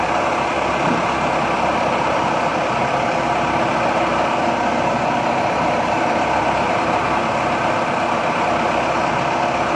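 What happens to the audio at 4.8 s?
Nothing goes wrong at 4.8 s; the sound carries on intact through that moment with no dropout, click or distortion.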